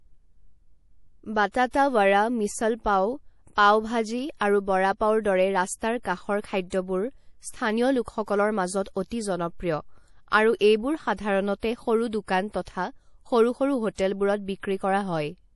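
Throughout the speech, nothing sounds above 11.5 kHz, and the sound is watery and swirly, with chirps on s sounds. That points to MP3 compression, likely at a low bitrate near 48 kbps. Short on bits, the encoder dropped the treble and switched weak frequency lines on and off between frames.

At 13.95 s a short hiss comes just before a sharp attack and lasts about 35 ms, to 13.98 s. This is pre-echo. The codec spread noise sized for the loud attack across its whole block, into the quiet moment before it. The attack sounds smeared.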